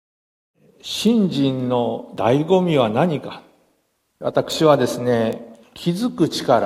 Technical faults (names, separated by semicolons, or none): bit error spike